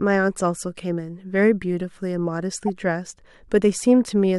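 A corrupt frame decoded in this speech recording: one compressed frame had damaged bits, and the decoder played it instead of discarding or concealing it. Misread gain values and spectral codes placed energy at frequencies that don't belong to the speech, so from 2.67 to 2.69 s a brief glitch is heard. It peaks at about -20 dBFS, and its roughly 24 ms duration suggests a single bad frame.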